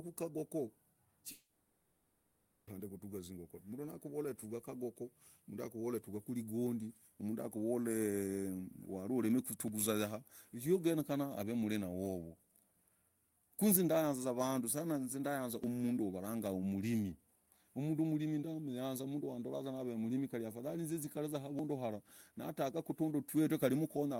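From 1.31 to 2.70 s the speech stops and a fading buzz-like continuation of the last sound fills the whole gap. This points to a long network dropout, likely lost packets concealed by the receiver. The speech returns without the missing 1.4 s.

At 9.68, 15.64 and 21.59 s the speech skips abruptly, with no silence at the join. The jumps recur every 6 s and each removes about 40 ms. This is audio missing between chunks, likely from a recorder dropping samples at each chunk boundary.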